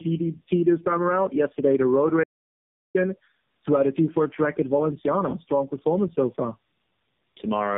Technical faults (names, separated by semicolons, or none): tandem speech coding; audio dropout to silence